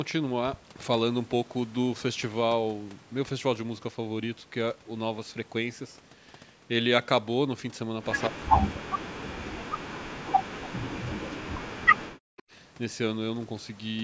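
From 8.2 to 8.28 s, a faint delayed copy of the speech comes back. It trails by about 194 ms and sits about 15 dB below the speech. This is likely an echo leak: a loudspeaker's sound slipped past the echo canceller.

From 8.29 to 12.27 s, the speech dips. At its deepest it falls by about 40 dB. The likely cause is speech suppressed in double talk. The canceller could not tell the talker from the echo, so it turned both down.

At 12.37 to 12.43 s, the echo leak returns briefly. The delay is again about 194 ms. It is quieter this time, about 25 dB below the speech.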